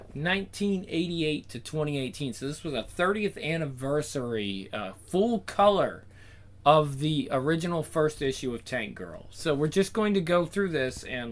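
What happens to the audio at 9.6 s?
Nothing goes wrong at 9.6 s: the audio carries straight through that moment with no dropout, click, glitch or other fault.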